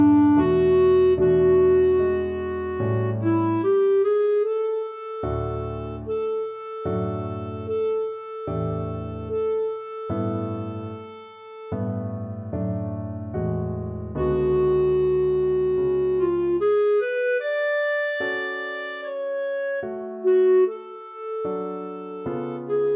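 No technical faults can be heard anywhere in the audio.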